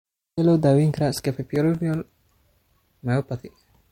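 A disc scratch defeats error correction once per revolution, causing CD scratch ticks: from 1.17 to 1.94 s, after "loo daweyn karaa", five brief, regular clicks, the longest about 3 milliseconds.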